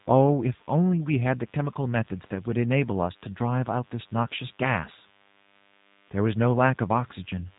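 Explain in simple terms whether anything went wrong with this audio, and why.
Three things went wrong in this speech recording.

A DECT cordless phone buzz runs through the whole clip. A nearby cordless phone sends short radio pulses 100 times a second. The audio circuit picks them up and turns them into a faint, thin, steady buzz at 100 Hz.

The G.729 codec also affects the whole recording. This phone-call codec rebuilds speech from a rough model rather than sending the real waveform. Nothing above 4 kHz gets through. The voice sounds muffled, slightly rough and a little artificial, and the damage is plainly audible.

There is VoIP packet loss concealed by the speech codec from about 4.36 to 4.38 s. A small piece of the call went missing, and the gap fits a single lost 10 ms frame. The decoder guessed the gap by stretching the sound it had just received, so the voice is briefly stretched and fading, and stays weak or distorted for a moment before it recovers.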